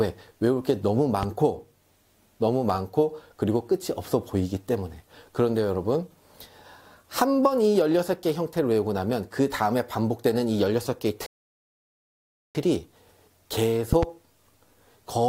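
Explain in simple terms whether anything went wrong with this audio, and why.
A sudden electrical surge, likely from a plug, switch or static, caused a loud pop. You hear a sharp single pop at 1.23–1.25 s and a quick double pop at 13.93–14.05 s over the sound.

A tiny slice of the stream went missing, likely a brief glitch in handling the data, which counts as dropped samples. The waveform jumps, giving one short click at 2.70 s.

The player ran out of downloaded audio and waited for more, a rebuffering stall. The sound goes silent from 11.26 to 12.55 s, then picks up exactly where it stopped, adding about 1.3 seconds.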